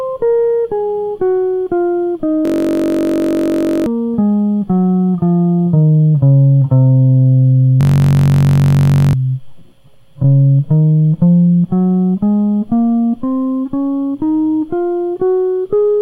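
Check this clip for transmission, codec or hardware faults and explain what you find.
The music has two system hang loops, at 2.45–3.86 s and 7.81–9.13 s. The system froze while the hardware replayed one 21.33 ms slice, which fits a 1024-sample buffer. The result is a steady 46.9 Hz buzz, with about a second and a half of music missing each time.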